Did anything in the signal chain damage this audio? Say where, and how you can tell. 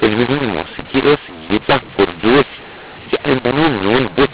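Yes. The damage is at the codec decode stage, where mu-law and A-law are mixed up. The speech is G.711 telephone audio, band-limited below 4 kHz at 8 kHz sampling. It was written as mu-law and read back as A-law throughout the clip. Because the two logarithmic curves assign codewords differently, each decoded sample lands at the wrong amplitude. Some come out too loud and others too soft, which makes the speech harsh and gritty. The quietest samples are pushed well above zero, so the pauses fill with noise instead of falling to silence.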